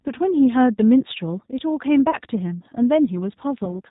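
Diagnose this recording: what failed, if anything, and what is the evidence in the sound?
The codec stage is at fault throughout. The speech has the rough, slightly synthetic texture and the hard cut above 4 kHz of a G.729 codec, and the damage is plainly audible across the whole clip. That points to G.729A at 8 kbit/s, which rebuilds each 10 ms frame from a vocal tract filter, a pitch predictor and a handful of pulses. The fine detail of the original waveform is not carried.

The network stage shows VoIP packet loss concealed by the speech codec at two points, 2.11 to 2.16 s and 3.65 to 3.77 s. At each point the speech is stretched out and fades instead of leaving a clean gap. Each event fits a single lost 20 ms packet. The decoder extrapolated from its last pitch and filter state with falling gain, and the second event stays distorted longer as later frames rebuild from the corrupted state.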